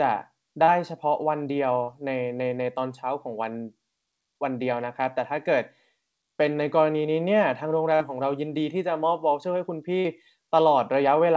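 Short concealed packet loss occurs at 0.64 s, 1.83 s and 10.0 s. Each time about 40 ms of the call arrived too late for the decoder, and the receiver bridged the hole with 35 to 44 ms of synthesised sound, extending the preceding pitch or noise before blending back into the real signal. Each is a brief smear or flutter in the speech, and a short consonant in the gap can disappear.

A burst of packet loss follows at 7.95 to 8.03 s, where a run of about 40 ms of packets was lost together. The receiver carried the last sound forward for about 46 ms while lowering its level, so the speech stalls into a held, fading tone or hiss and then picks up slightly further on, with that stretch gone. Throughout, nothing is heard above 8 kHz, which fits a wideband call codec such as G.722.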